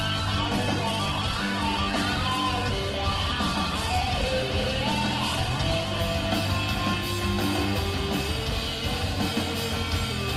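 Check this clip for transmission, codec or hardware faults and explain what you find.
One fault is present.

Adaptive stream starting at a low bitrate, 0.0 to 6.0 s: the player opened on a lean rendition, then switched up once it had measured the connection. Until 6.0 s nothing sounds above 12.1 kHz and artefacts are stronger, which suggests Opus near 12 kbit/s. Quality then jumps cleanly, with no gap, which fits roughly 64 kbit/s.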